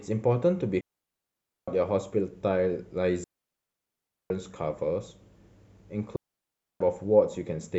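At 0.81 to 1.68 s, 3.24 to 4.30 s and 6.16 to 6.80 s, the speech drops into near silence for roughly 0.87, 1.06 and 0.64 s: a digital wireless dropout, where the receiver mutes after losing too much data. Unlike an analogue dropout, no hiss or noise burst surrounds each clean hole.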